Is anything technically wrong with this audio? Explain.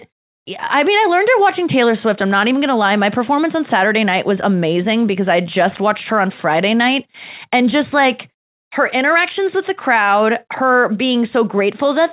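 No, nothing is technically wrong with this audio; its lack of anything above 4 kHz is simply the normal band limit of the G.711 call path it came through.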